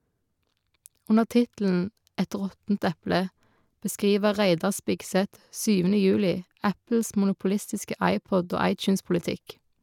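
No faults detected anywhere in this speech recording.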